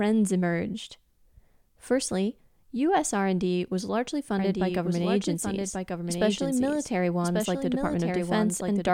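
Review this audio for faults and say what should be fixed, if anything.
A doubled audio track runs from 4.39 s to the end of the clip. The speech is joined abruptly by a second full-band copy trailing about a second behind, about 5 dB below the original, with no decay or room colour. This is likely the same signal captured again through a slower path, or an edit that left two copies out of alignment. The second copy should be removed. To prevent it, route each source through one capture path only and check edit timelines for duplicate overlapping regions before export.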